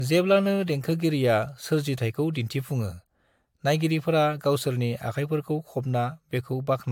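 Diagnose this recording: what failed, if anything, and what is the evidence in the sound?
Codec stage, throughout the speech: a swirly, hollow, smeared sound with blurred consonant attacks, and nothing above 19.4 kHz. That bandwidth suggests a single mid-rate AAC encode, which would not smear this much. The likely cause is generation loss from about three encodes, each requantising on a fresh frame grid.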